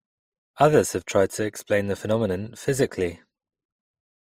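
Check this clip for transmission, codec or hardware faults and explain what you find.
The speech carries one fault throughout: transcoding between lossy codecs. It was likely encoded once, decoded, then re-encoded by a second lossy codec. The character fits a roughly 54 kbit/s MP3 stage followed by Opus at about 32 kbit/s. The second encoder spends its limited bits reproducing the first one's smearing and warble, then adds its own coarse shaping. The speech sounds dull at the top, with a swirly, watery edge and a metallic grain layered together.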